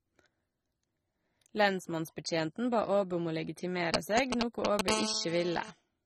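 Throughout, the speech has plainly audible AAC compression damage, likely from low-bitrate AAC-LC around 24 kbps, sounding dull and smeared. A spectrogram shows a hard ceiling at 16.6 kHz.

From 3.94 to 4.89 s, GSM signalling bursts from a nearby phone give a galloping dit-dit-dit of 217 Hz buzzes, somewhat louder than the speech, seen as clustered vertical stripes.

From 4.89 to 5.71 s, steady GSM phone buzz follows: a raspy 217 Hz buzz about 4 dB below the speech, drawn as continuous horizontal harmonic lines.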